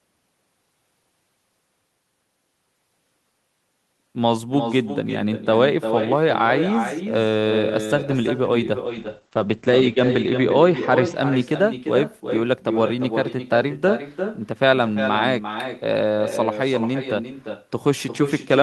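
Throughout, echo with no canceller trails the speech by about four tenths of a second at about 8 dB down, a thin copy seen as quieter repeated waveform bursts. From 8.86 s to 11.21 s a call bitrate drop muffles and roughens the speech, consistent with the bitrate falling to around 11 kbps. The spectrogram's top edge drops from 20 kHz to 8 kHz for about 1.45 s.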